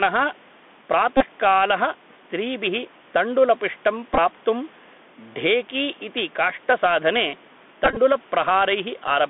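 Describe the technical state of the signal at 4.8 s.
At 4.8 s you're in the middle of two faults that run through the whole clip. The first is gain pumping: the level swings by roughly 5 dB, with the room noise sitting about 34 dB under the speech. That's likely a gain set too high with a fast limiter or compressor clamping down on every peak, so the dynamics sound squashed.

The second is the Bluetooth CVSD headset codec, and its damage is plainly audible. The band runs only from 200 Hz to 3.5 kHz. The one-bit, adaptive-step coding points to a 64 kbps headset link, and it can't keep up with loud high sounds. Sibilants come out scratchy, and there's a grainy hiss under the speech.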